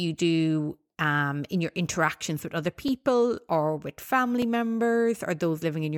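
A speech recording with two brief blocks of digital silence, at 2.88 s and 4.42 s, about 2.2 ms and 2.9 ms long, the second fitting a 128-sample buffer left unfilled in time. Each hard cut to silence ticks audibly, showing as a flat-line notch in the waveform and a thin vertical broadband stripe on the spectrogram.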